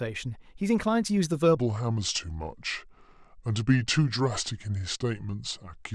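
A section at the wrong speed runs from 1.57 s to the end at 5.94 s: the speech slows to about 0.77 times its recorded rate and drops roughly five semitones, sounding deep and sluggish, likely from playback against a mismatched clock.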